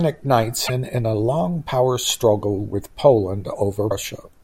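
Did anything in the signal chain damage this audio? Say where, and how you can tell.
Yes, at the codec stage: damaged data in a compressed stream. Brief glitches at 0.64–0.70 s and 3.88–3.92 s show the decoder hitting corrupted frames, misreading them, losing sync and producing garbage until it locks onto the next valid frame header.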